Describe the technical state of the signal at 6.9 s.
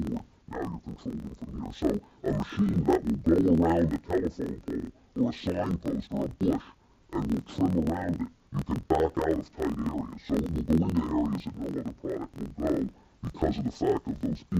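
At 6.9 s, as across the whole clip, interleaved audio is being read as planar: each 24 ms block's alternating left-right samples are split into halves and played at half speed. The sound drops an octave, doubles, and chops at about 41.7 Hz.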